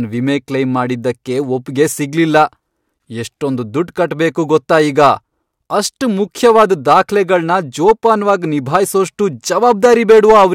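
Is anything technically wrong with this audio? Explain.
Yes. Hard clipping affects the speech in three stretches, from 6.45 to 7.35 s, 7.88 to 8.31 s and 9.58 to 10.45 s. In each, the level runs past what a stage in the chain can pass, by about 5 dB, 4 dB and 6 dB respectively, so the waveform peaks are sheared flat. Those squared-off tops generate high harmonics absent from the original, heard as a harsh, crackling fuzz riding on the louder syllables, roughest in the final stretch.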